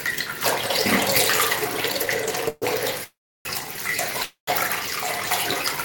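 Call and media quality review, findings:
Call audio freeze, 2.48–2.65 s: last sound stretched into a fading buzz, about 30 ms of silence, then resumes intact. Likely jitter buffer underrun from held packets. Spectrogram: smeared band, brief gap.

Call audio freeze, 3.04–3.48 s: 414 ms inserted, 330 ms silent. Waveform: short decay, flat stretch.

Call audio freeze, 4.23–4.50 s: 243 ms inserted, 130 ms silent.

Nothing lost in any of the three. Each gap adds to the delay.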